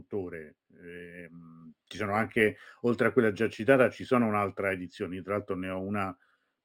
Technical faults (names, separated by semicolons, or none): imaging from linear upsampling